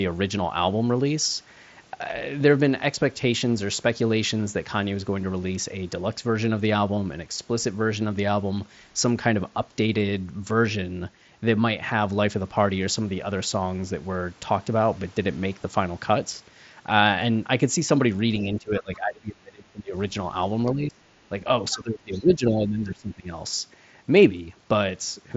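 From 18.44 to 19.95 s the echo canceller likely faced double talk, with both ends speaking at once. Unable to tell the near talker from the loudspeaker echo, it pulled the whole signal down, so the speech sinks by roughly 25 dB and turns dull and patchy. The same speech suppressed in double talk likely recurs from 20.74 to 21.04 s, a short dip of similar depth.

From 21.71 to 21.76 s the other side's voice leaks through, likely because the echo canceller left some of the loudspeaker's playback in the microphone signal. It is a brief scrap about 20 dB below the talker.

Almost at once, from 21.74 to 23.3 s, suppression likely strikes again, cutting the speech by around 20 dB for about a second and a half. Within that stretch, from 22.14 to 22.33 s, the other side's voice likely leaks through once more as a faint fragment at a similar low level.

The mSBC Bluetooth headset link carries all of this, its band stopping near 7.7 kHz, with a faint graininess on louder sounds.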